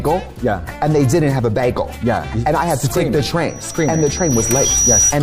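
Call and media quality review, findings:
Rising single tone at 5.8 kHz, 3.48–5.14 s, swelling over about a second and a half to roughly 5 dB above the programme. Loudspeaker feedback squeal: mic picking up its own speaker, loop gain above unity at 5.8 kHz.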